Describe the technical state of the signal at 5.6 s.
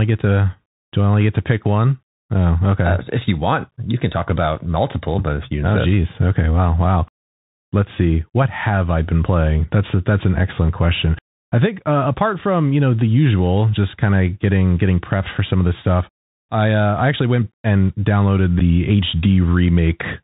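At 5.6 s the speech is passing through the Bluetooth CVSD headset codec, as it does for the whole clip. Each sample carries one bit telling the decoder to step up or down, and the step size adapts. The band stops at 4 kHz, so the speech sounds narrow and dull. Loud high-frequency sounds outrun the step and distort, s sounds turn scratchy, and a granular hiss sits underneath. The damage is plainly audible and fits a 64 kbps stream.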